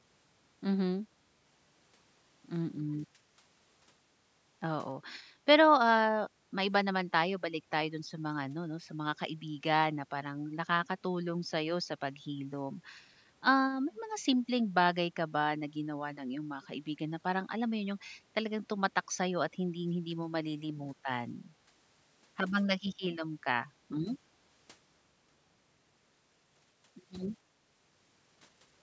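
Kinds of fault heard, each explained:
Echo leak: an echo canceller at one end likely failed to fully remove its loudspeaker's sound from the microphone, sending a very faint delayed copy back. From 2.78 to 2.95 s, a short scrap of speech returns about 281 ms after the original.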